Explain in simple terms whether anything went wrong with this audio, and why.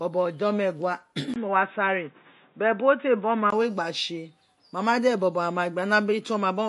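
Yes, two things went wrong. Across the whole clip the speech has a watery, swirly quality, s sounds turn metallic, and nothing comes through above about 11.3 kHz. That points to MP3 compression as the likely cause. It stays constant from start to finish rather than coming and going.

From 1.34 to 3.52 s the sound suddenly turns dull and boxy, losing everything above 3.8 kHz, with a faint new background noise, then clears again. A 20 ms gap at 1.34 s marks the change, so the likely cause is the input switched to a poorer device. Unlike the compression, this starts and stops abruptly, and loudness stays about the same.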